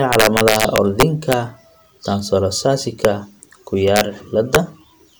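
Integer overflow cracks this speech from 0.13 to 1.33 s, driven about 4 dB too hot. Peaks wrap to the opposite sign instead of limiting. Shorter violent snaps follow at 3.05 s, 3.96 to 4.01 s, and 4.55 s, each about 1 to 2 dB over.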